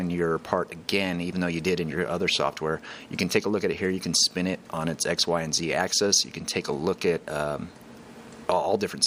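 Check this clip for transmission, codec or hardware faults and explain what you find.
No faults turn up anywhere in this clip.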